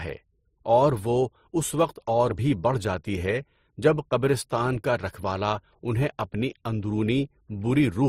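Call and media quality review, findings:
Transcoding between lossy codecs, throughout: stacked artefacts from two codecs, nothing above 19.6 kHz. Likely MP3-to-Opus chain, around 41 then 32 kbit/s; Opus re-encodes MP3 artefacts.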